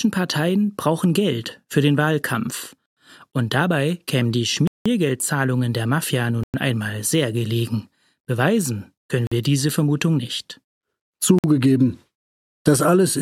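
The speech drops to dead silence five times, and each gap is likely a Bluetooth stall. The first comes at 2.86 s and lasts 110 ms. The second, at 4.67 s just after "dabei kämen die", runs 181 ms. Then 6.43 s for 105 ms, before "einmal sehr gelegen". Then 9.27 s for 46 ms, before "wir diese". The last is 11.39 s for 53 ms. Each time the headphone buffer empties, playback halts, and the sound resumes when delayed packets arrive.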